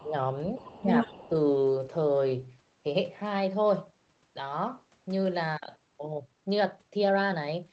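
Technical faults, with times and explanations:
0.00–0.14 s, 0.72–0.87 s and 1.29–1.34 s, speech suppressed in double talk: the talker's level sinks in short bites, about 20 dB at the very start, around 15 dB in the middle one and only a few decibels in the last brief dip. Each bite lasts well under a fifth of a second. The likely cause is an echo canceller that, with both ends talking at once, could not tell the near voice from loudspeaker echo and turned everything down.
0.57–1.29 s, other side's voice leaking through: a second voice sits under the talker for most of a second, at roughly the same loudness, so the two compete rather than one clearly dominating. It is most likely the far end's audio playing from the talker's loudspeaker and reaching the microphone, with the echo canceller failing to remove it. The suppression dips at 0.72 s and 1.29 s fall inside or at the edge of this stretch.
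5.51–7.72 s, time-stretched section: from 5.51 s to the end, the pace jumps to about 1.35 times normal speed while the pitch stays where it was. The sound becomes rushed. This is likely software compressing the audio in time by dropping short slices and splicing the remainder together, which keeps pitch intact but leaves small discontinuities at the joins.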